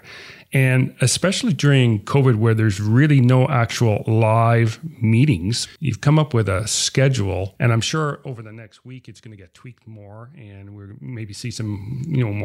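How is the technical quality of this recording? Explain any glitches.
The recording has two glitches of one kind, zipper noise on level changes in the speech. From 7.66 to 8.75 s, a fast ticking rides on the voice as the level drops by about 20 dB. From 10.75 to 12.00 s, a similar ticking accompanies a rise of about 20 dB. The gain moves in unsmoothed 1 dB steps, around twenty and then fifteen per second, and each jump clicks.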